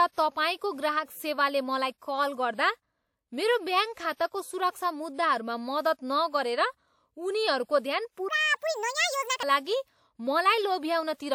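A speech recording in which, from 8.29 to 9.43 s, the voice suddenly turns high and hurried, jumping up about seven semitones and running at 1.61 times its normal pace before snapping back to normal. Because pitch and tempo shift together and switch instantly at both edges, this is a section at the wrong speed, most likely a stretch of samples played out against the wrong clock, as when an editor or player misreads the rate for that segment.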